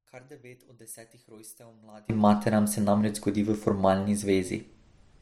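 A speech clip in which one stereo channel was likely inverted from the start to 2.1 s, so the identical centred content cancels on a mono sum: the voice drops by about 27 dB, leaving only a faint residue of the channel difference.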